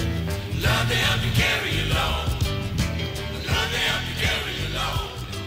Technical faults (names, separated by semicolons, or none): none